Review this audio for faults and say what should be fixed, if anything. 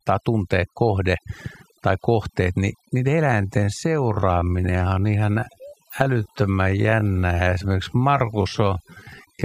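Overdone noise removal runs the whole way through: the background drops away and breaks up into twinkly specks.

From 3.20 s, right after "tai kohteet niin niiden", to the end, the pace drops to about 0.64 times normal with unchanged pitch, so it drags. That's likely a time-stretched section.

Go lighter on the noise reduction, and keep the original timing instead of stretching that stretch to fit.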